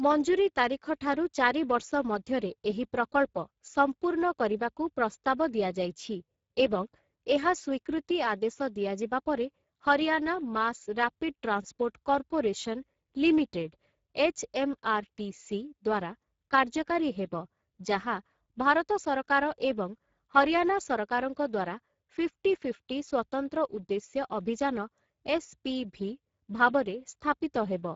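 From start to finish the speech sounds hoarse and grainy, with a rough edge on every voiced stretch, and nothing reaches above 7.7 kHz. This is Speex codec damage, and it is plainly audible. Speex rebuilds speech from a predictive filter driven by a coded excitation signal. The coarseness here points to a low setting, around 10 kbps, where too few bits go to the excitation to carry the fine detail of the voice.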